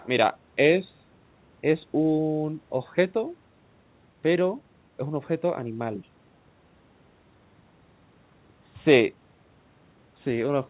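No technical faults can be heard in this speech recording. It passed through a call path whose content stops at 4 kHz, giving the narrow telephone-band sound that fits a G.711 mu-law codec at 64 kbps.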